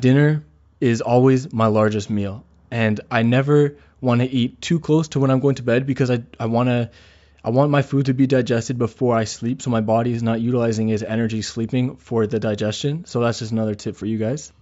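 Across the whole of this speech recording there are no audible technical faults in the signal.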